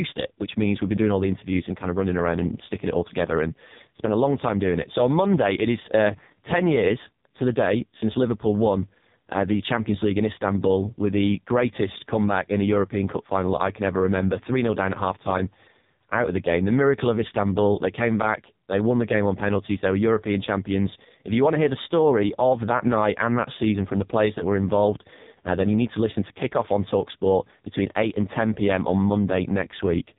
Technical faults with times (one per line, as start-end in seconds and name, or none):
0.00-30.19 AMR narrowband mobile codec